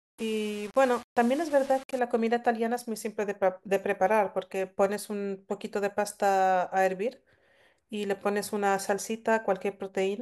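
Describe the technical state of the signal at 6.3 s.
At 6.3 s the speech signal is intact, with no audible technical fault at that point.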